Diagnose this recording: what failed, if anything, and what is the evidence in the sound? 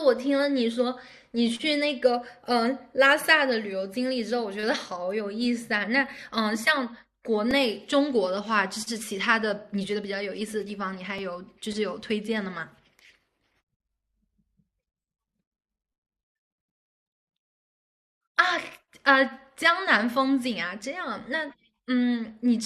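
The trouble is at the driver or buffer stage: two repeated-buffer glitches in the speech, at 7.51 s and 11.18 s. Each is a tiny tick-like buzz rather than an obvious stutter, because the repeated chunk is only about 2.67 ms, which fits a 128-sample buffer. Fresh audio didn't reach the device in time, so it replayed its last block, twice extra at 7.51 s and once at 11.18 s. Nothing seems to go missing; the sound just gets stretched slightly at those two points.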